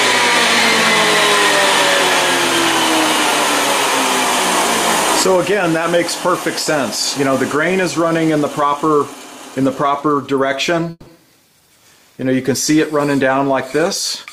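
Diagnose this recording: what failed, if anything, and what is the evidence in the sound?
A call audio freeze at the network stage, from 10.90 to 11.08 s: the last sound stretches into a fading buzz for about 160 ms, then roughly 20 ms of silence, and the audio resumes exactly where it stopped, now 160 ms late. That is the likely sign of delayed packets emptying the jitter buffer, not packet loss, since nothing is skipped.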